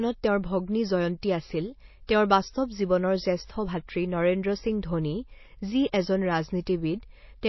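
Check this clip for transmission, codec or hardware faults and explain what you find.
Two faults are audible: codec damage across the whole recording and two brief pre-echoes.

The codec damage runs throughout and is plainly audible. Nothing in the speech reaches above 5.8 kHz, and the remaining upper band has a watery, swirling quality. The likely cause is MP3 compression at a starved bitrate, in the region of 24 kbps. With too few bits, the encoder cuts the treble at a fixed frequency and drops weak spectral lines, which switch on and off from frame to frame. On a spectrogram this appears as a hard ceiling at 5.8 kHz, with patchy, flickering holes below it.

Pre-echo occurs at 2.07 s, spreading about 18 ms, and again at 5.92 s, spreading about 10 ms. A sharp onset falls late within a transform block. The quantisation noise sized for that loud attack is spread across the whole block, so it also fills the quiet moment before the attack. 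The result is a short hiss leading into each onset, which sounds softened. On the waveform, low-level noise rises just before the attack. A spectrogram shows a broadband smear ahead of the onset edge.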